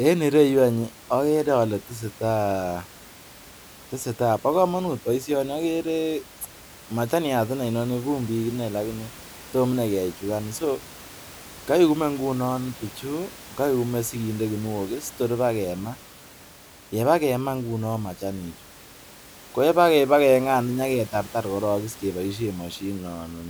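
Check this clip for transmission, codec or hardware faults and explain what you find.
No transmission, codec or hardware faults.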